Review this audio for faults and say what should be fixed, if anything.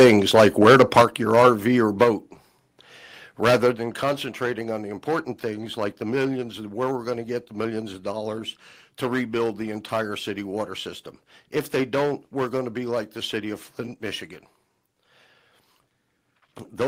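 Hard clipping runs through the whole speech clip, with the signal driven about 14 dB past what one stage could pass. A few percent of samples were pinned at that stage's limit, so every loud syllable carries a harsh, fizzy edge. On the waveform the peaks are sliced into flat plateaus at a fixed level. On the spectrogram each loud moment throws vertical smears of energy high into the kHz range. To prevent it, lower the gain ahead of the stage that overloads so that peaks keep some headroom.

From 0 to 1.02 s there is a separate microphone overload, likely caused by the input volume being set too high for the converter. Peaks run about 4 dB over its limit, and roughly a tenth of samples are cut off. The opening therefore sounds more crackly and strained than what follows. The waveform there is dense with squared-off tops. The spectrogram shows heavier broadband splatter above the speech harmonics. 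To prevent it, set the microphone input lower before recording starts.

The microphone volume is stepped down three times, likely by the call software reacting to that overload. The level drops by about 6 dB at 1.02 s, then by about 4 dB at 2.04 s and again at 3.75 s. Voice and background fall together at each point. On the waveform the envelope shrinks abruptly at each time, like a staircase. On the spectrogram the whole frequency range dims at once, with a vertical edge. To prevent it, disable automatic microphone gain adjustment and fix the input level manually.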